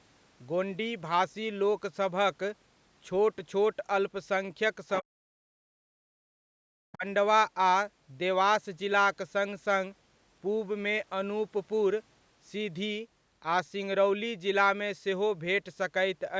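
Speech recording where the talker drops out in chunks: from 5.01 to 5.56 s and 5.75 to 6.3 s the voice sinks by around 40 dB, then again from 6.91 to 7.05 s by about 25 dB. That's likely speech suppressed in double talk, with the echo canceller clamping down while the far end talked over it. In between, at 6.58 to 6.63 s, the room sound dips by about 31 dB for roughly 50 ms. That's background gated by the echo canceller, which briefly pulled the mic down against loudspeaker output before letting go.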